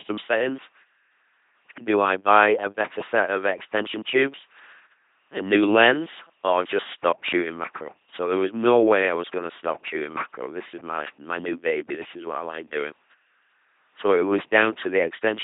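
From start to finish the speech carries heavy LPC-10 vocoder damage at 2.4 kbit/s. Each moment is resynthesised from pulses or noise through a ten-pole filter, giving a buzzing robot voice with misplaced hiss. A spectrogram shows rigid harmonic combs, smeared formants, and nothing above 3.7 kHz.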